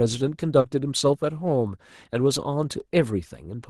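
Around 0.60 to 0.65 s there's a short concealed packet loss: roughly 40 ms of the call arrived too late, so the decoder patched the gap by extending the preceding sound before blending back in. You hear it as a quick smear or wobble in the speech.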